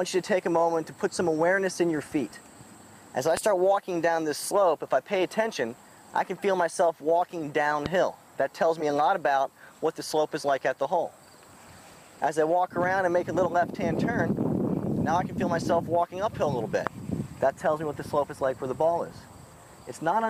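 At 3.37–3.39 s and again at 7.86–7.88 s, a loud pop sits on top of the sound, a single sharp thump peaking roughly 15 dB above the surrounding level while the audio continues underneath. The likely cause is a voltage step or pulse, from a plug, switch, static or driver glitch, entering the chain. At 8.80–8.82 s a corrupt frame was decoded: one damaged compressed frame was played anyway, so energy landed at the wrong frequencies for its length, giving a short chirp-like blip peaking near -20 dBFS. A third identical pop follows at 16.87–16.89 s.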